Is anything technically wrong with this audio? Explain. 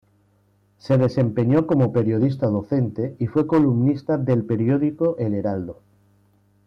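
Yes, there is hard clipping in three stretches, from 0.91 to 2.82 s, 3.37 to 3.90 s and 4.29 to 5.06 s. The speech overdrives a stage by about 5 dB, and by about 7 dB in the middle stretch, so its peaks are sliced flat. This adds harsh high harmonics, heard as crackly fuzz on louder syllables.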